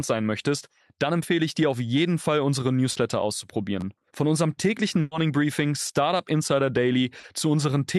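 At 2.91 to 2.97 s, short concealed packet loss replaces about 40 ms of speech with a continuation of the preceding sound. It is heard as a brief smear. On a spectrogram the harmonics run flat and slightly blurred before rejoining the real signal. The same fault returns at 5.87 to 5.91 s (20 ms) and 7.19 to 7.25 s (40 ms).

At 3.81 to 3.83 s, a repeated buffer plays one 11.6 ms slice two extra times, which fits a 512-sample buffer. It sounds like a tiny buzzy stutter. The waveform shows identical short blocks with hard steps at each join.

At 5.01 to 5.13 s, just after "unserem täglichen", a burst of packet loss removes 100 ms. The last sound is stretched and faded, becoming a held buzz or a fading hiss before speech resumes further on. A spectrogram shows smooth, decaying, unchanging bands where the real detail is missing.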